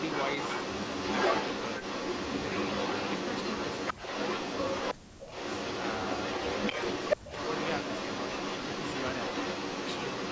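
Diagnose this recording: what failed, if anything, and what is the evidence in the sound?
Echo leak at the call-processing stage is the likely cause of the delayed copy of the speech that runs through nearly the whole clip, from the start to 4.94 s and again from 5.19 s to the end. It trails the direct speech by 357 ms and sits about 5 dB above it. A fixed lag at that level, riding on conversational speech, points to a loudspeaker-to-microphone path the far-end echo canceller failed to remove. A room reflection would arrive within tens of milliseconds, and a network or playback repeat would not track the talker's own voice this way.

Speech suppressed in double talk, also in the call processing, is the likely cause of the sudden holes in the speech while the echo overlaps it. From 4.93 to 5.38 s, about 400 ms of speech drops by roughly 40 dB, and 7.16 to 7.31 s is hit just as hard. At 6.73 s there is a brief dip of only about 5 dB. 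These cuts fall exactly where the two signals collide, so the canceller's suppressor is gating its own talker. Packet loss would produce dropouts unrelated to overlapping speech, and the 8 kHz ceiling from the call's microphone path does not explain them.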